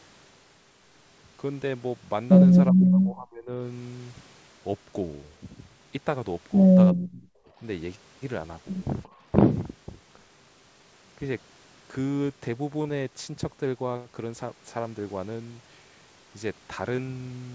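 Speech suppressed in double talk at 2.7–3.52 s and 6.93–7.61 s, nearly vanishing, then a milder dip at 9.07–9.18 s, likely from an echo canceller ducking overlapping talk.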